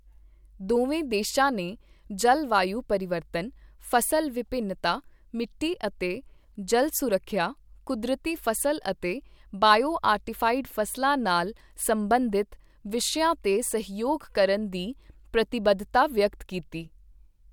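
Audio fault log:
No fault found in the audio.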